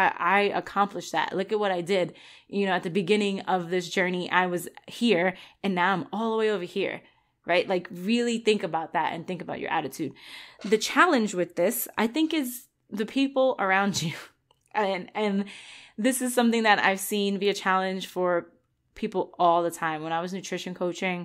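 No audible faults anywhere in the recording; nothing in it calls for attention.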